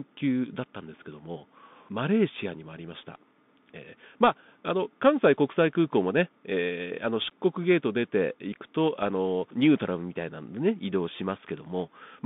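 Throughout, the speech carries the Bluetooth CVSD headset codec. One-bit delta coding with an adapting step leaves the band confined to roughly 150 Hz to 3.6 kHz, with scratchy sibilants and a granular hiss. A spectrogram shows a hard ceiling near 3.6 kHz and a fuzzy noise floor beneath the voice.

At 8.53 s comes unconcealed Bluetooth headset packet loss. About 3.8 ms of audio, likely a single lost packet, drops out and is replaced by silence or an idle pattern, giving a tiny abrupt gap that can click. The waveform shows a sharp-edged notch, and the spectrogram shows a thin vertical break.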